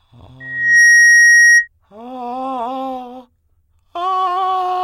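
From 0.40 s to 1.68 s the music is overtaken by loudspeaker feedback squeal: a steady 1.9 kHz tone swells over roughly 0.4 s to about 15 dB above the music. Its single fixed pitch and self-reinforcing growth mark a microphone-to-speaker loop, not a mechanical whistle or tonal interference.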